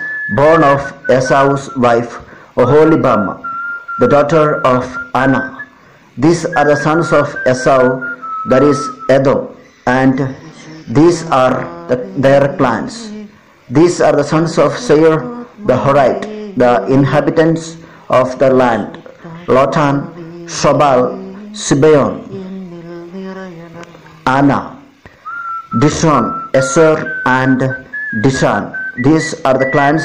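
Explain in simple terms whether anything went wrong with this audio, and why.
Nothing went wrong here.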